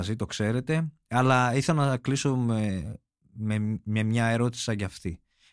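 Listening through the speech, nothing stood out as a technical fault at any point.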